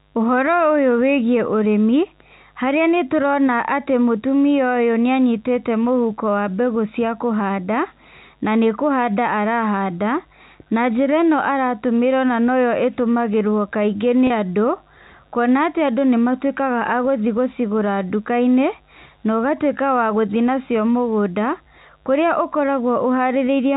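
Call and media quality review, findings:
Mains buzz, whole clip: faint steady raspy buzz, roughly 40 dB below the speech. 50 Hz harmonics from switching spikes, likely a dimmer, rectifier or missing shield, riding through the 4 kHz G.711 telephone band.

Packet loss with pitch repetition, 14.27–14.30 s, just after "noyo ĩtũmagirwo kaingĩ": brief held, buzzy tone. 30 ms gap, consistent with three lost packets, bridged by looping the last pitch period before speech resumes.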